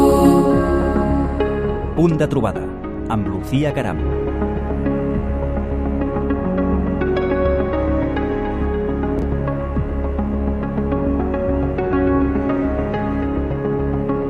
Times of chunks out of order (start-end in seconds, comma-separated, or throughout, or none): 9.19-9.23